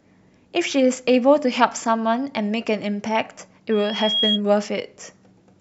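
Loudspeaker feedback squeal runs from 3.71 to 4.41 s in the speech. A microphone is picking up the loudspeaker it drives, and at 3.3 kHz the loop gain passes unity, so a thin tone swells over about half a second until it rivals the speech.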